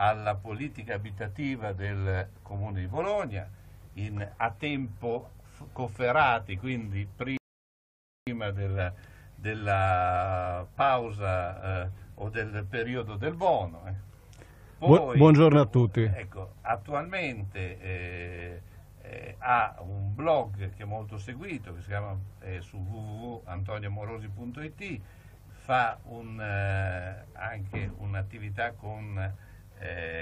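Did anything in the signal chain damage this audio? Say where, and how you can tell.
Yes, at playback: there's a rebuffering stall from 7.37 to 8.27 s. The sound drops to silence for about 0.9 s, then picks up exactly where it left off. The player ran dry of downloaded audio and waited for more, so nothing's missing, just time added.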